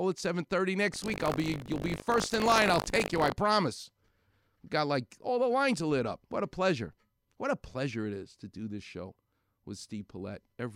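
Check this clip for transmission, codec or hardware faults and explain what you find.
One fault stands out, buffer tearing, from 0.92 s to 3.32 s in the speech. It sounds like a robotic 50 Hz rattle riding on the talker and present only while there is signal. The writer and the hardware reader of the ring buffer have slipped, so they cross every 20 ms period. About a tenth of each period replays audio roughly 70 ms old, and the hard joins on both sides produce the buzz.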